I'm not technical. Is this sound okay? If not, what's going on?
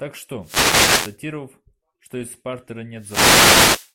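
No. A wireless microphone noise hit occurs from 0.40 to 1.18 s and again from 2.96 to 3.93 s. The radio link from the microphone weakens as reflected signals cancel each other, so hissing static briefly rises.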